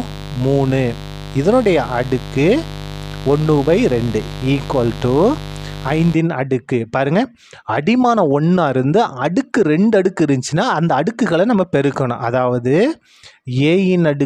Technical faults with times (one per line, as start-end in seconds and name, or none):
0.00-6.14 mains buzz